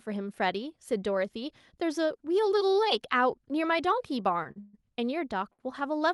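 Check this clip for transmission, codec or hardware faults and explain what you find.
Three short stalls and one longer freeze disrupt the timing of this speech, all near the end.

Short stalls from a late packet occur at 4.43 to 4.47 s, 4.51 to 4.58 s and 5.53 to 5.60 s. Each time, the next packet missed its playout slot and the jitter buffer emptied. The receiver stretched the preceding sound by 19 ms, 42 ms and 50 ms, so a syllable drags with a faint buzz or dip but nothing is lost.

A call audio freeze runs from 4.60 to 4.75 s. The sound holds and continues as a fading buzz or hiss for about 137 ms, with no silence, then resumes exactly where it stopped. This is likely caused by packets delayed in transit that left the jitter buffer empty, inserting a gap rather than dropping content.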